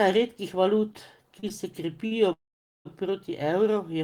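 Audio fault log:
0.93–1.52 s, repeated stalls (stutter): the speech catches four times in about half a second, each gap bridged by stretching the last sound, 65 ms added in all and the longest pause 31 ms, with nothing lost. Unlike a single late-packet stall, the hesitation recurs, so the delivery drags unevenly.
2.06–2.13 s, short stall from a late packet: one sound is held about 50 ms too long while the receiver waits for a tardy packet, then the speech resumes exactly where it paused. It is a single brief smear, not a recurring stutter or a fade to silence.
2.33–2.87 s, call audio freeze: the speech stops, the last sound trails off briefly, and then about 480 ms of near-silence follows before the audio picks up where it left off, the delay growing by roughly 523 ms. This long fade into quiet points to packets likely held up in transit, and it is far longer than a momentary stall.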